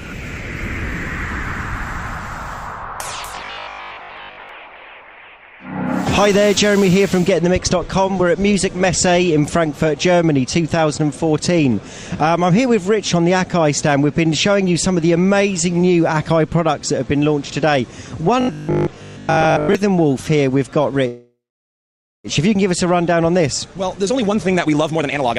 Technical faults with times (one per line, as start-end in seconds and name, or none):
3.27-4.49 robotic sound from repeated short buffers
18.41-19.75 robotic sound from repeated short buffers
21.07-22.27 call audio freeze
23.12-25.38 jitter buffer speed-up